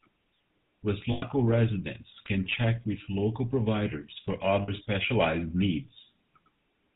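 The speech has passed through the GSM full-rate codec, which models the vocal tract and excites it with sparse, regularly spaced pulses, which fits a 13 kbps full-rate link. Everything above 4 kHz is gone, and the voice carries a plainly audible buzzy, gravelly roughness.

Lost GSM frames occur twice. From 1.12 to 1.23 s, about 100 ms of frames went missing, and from 4.62 to 4.69 s about 60 ms more. Each gap was filled by repeating the last good frame, so the sound hangs briefly as a rough, metallic ring.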